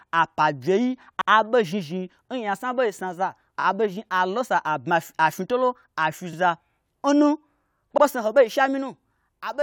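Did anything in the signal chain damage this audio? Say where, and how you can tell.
Yes: repeated frames in the codec or storage stage at 1.20 s, 3.59 s (after "ɓei snaza", played three times), 6.32 s and 7.97 s (before "ho ɓei"), each an exact 21 to 85 ms stutter lengthening the clip, unlike a dropout.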